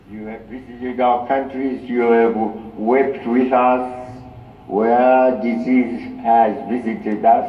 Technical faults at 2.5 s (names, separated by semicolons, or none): none